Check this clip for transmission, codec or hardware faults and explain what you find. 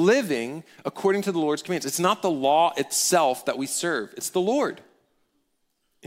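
No transmission, codec or hardware faults can be heard in the speech; the signal stays continuous and stable throughout.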